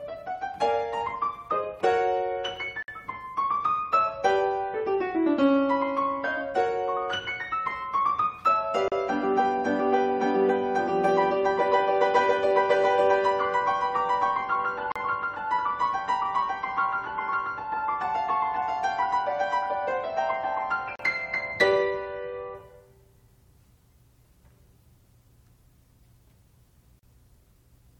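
At 2.83, 8.88, 14.92, 20.96 and 26.99 s there's a gap at a join of encoded pieces: separately encoded chunks spliced untrimmed, leaving 56 ms, then 37 ms, dropouts every 6 s.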